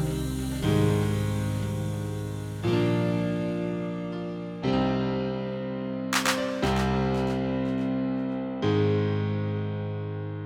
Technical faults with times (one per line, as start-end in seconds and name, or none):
none